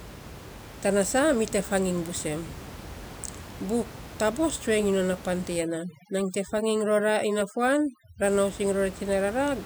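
A speech recording carrying room noise about 16 dB below the voice shows overdone noise removal from 5.56 to 8.24 s. Here the background drops and breaks up into twinkling specks, and quieter parts of the voice are cut away along with the noise. What separates this from a simple noise gate is that the cutting happens band by band rather than muting everything at once, so fragments of the noise survive as flickering tones.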